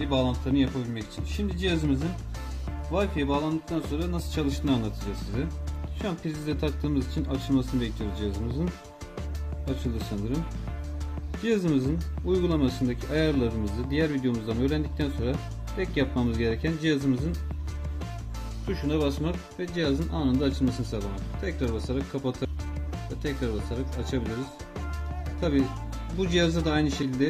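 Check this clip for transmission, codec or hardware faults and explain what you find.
The clip has one kind of fault, compressed frames skipped, at 22.45 s and again at 27.02 s. Whole compressed frames never reach the output, so the sound jumps forward, losing roughly 0.4 s at the first point and about 150 ms at the second, which fits runs of 32 ms frames. Unlike a dropout, no silent gap is left.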